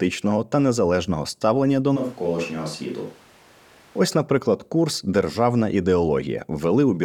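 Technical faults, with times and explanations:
1.98–3.98 s, switch to a distant microphone: the speech abruptly turns roomy and hollow, with thinner low end, a level drop of about 5 dB and a background noise floor only about 25 dB below the speech. The change is sudden at both edges. The likely cause is that the close microphone's feed dropped out, leaving a far-off pickup such as a camera microphone that hears more room reflection and ambience than direct sound.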